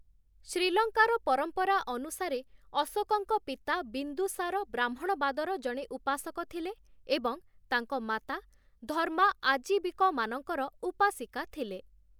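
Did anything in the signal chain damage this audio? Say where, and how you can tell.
No, nothing in the signal chain damaged this audio.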